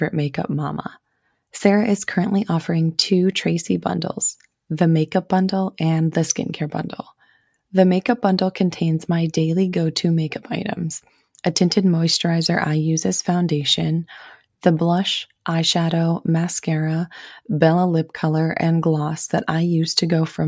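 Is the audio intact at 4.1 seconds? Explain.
Yes, the speech at 4.1 seconds is intact, with no dropout, click, distortion or other fault at that moment.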